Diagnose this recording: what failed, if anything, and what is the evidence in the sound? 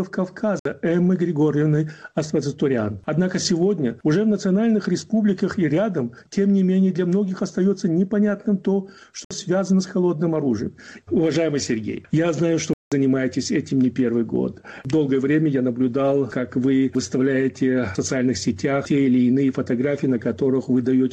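The sound cuts out to silence three times, at 0.59 to 0.65 s, 9.25 to 9.31 s (61 ms each) and 12.73 to 12.92 s (183 ms), then picks up as if it kept playing. That's likely a Bluetooth dropout at the wireless playback link, with packets arriving too late and being discarded.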